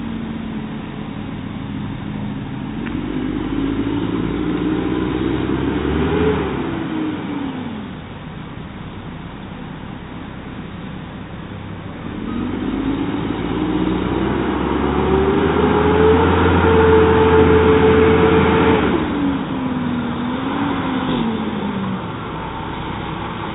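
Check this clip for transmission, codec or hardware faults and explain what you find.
Nothing stood out on listening that would point to a problem in how the audio was carried, encoded or captured.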